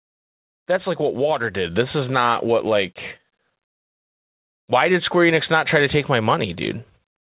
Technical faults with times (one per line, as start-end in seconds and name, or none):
1.65 microphone volume stepped up